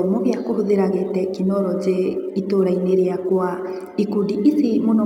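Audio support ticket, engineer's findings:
Sample clock jitter, throughout the speech. Roughness and hiss riding on the signal, strongest on loud and bright passages, gone in pauses. Unlike a steady noise floor, it tracks the waveform slope. Probable converter clock: timing wander of a few microseconds, error about 40 dB below the signal.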